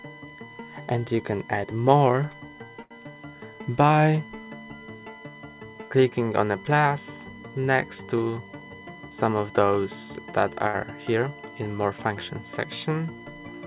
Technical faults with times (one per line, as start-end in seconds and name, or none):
0.00-13.66 USB whine
2.82-2.93 short stall from a late packet
8.53-9.17 jitter buffer speed-up
10.68-10.75 short stall from a late packet